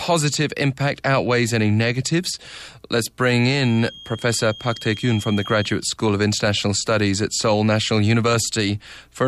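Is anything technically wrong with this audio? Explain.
Yes. From 3.48 to 5.83 s there is a feedback whistle, likely from a loudspeaker-to-microphone loop held just at the edge of feedback. A single 3.2 kHz tone sustains without building, heard as a thin whistle that slowly swells and fades, about 20 dB beneath the speech.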